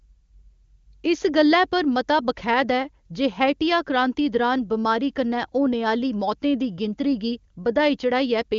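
No technical faults can be heard in this speech, which has passed through an AMR wideband (HD Voice) codec at 23.85 kbit/s with nothing above about 7.1 kHz.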